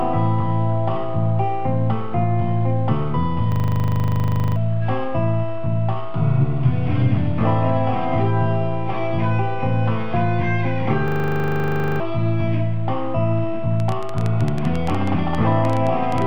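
Two system hang loops interrupt the sound, from 3.52 to 4.56 s and from 11.08 to 12.0 s. In each, the same 40 ms fragment repeats exactly, 26 times and then 23 times, producing a rough, buzzy stutter at 25 Hz. Playback stalled while the output hardware kept cycling one short region of its ring buffer, which points to a buffer of about 40 ms. Roughly a second of material is missing at each point.

From 13.80 to 16.23 s a train of clicks rides over the sound. About thirty similar pops arrive at irregular spacing, averaging 10.3 per second, and peak around 10 dB above the program level. The likely cause is electrical interference or a faulty connection or power supply injecting repeated impulses into the signal path.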